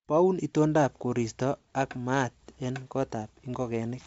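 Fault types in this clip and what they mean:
No faults are present; the speech passes through G.722 wideband telephone coding at 64 kbit/s, and any traces of that coding are at most faint.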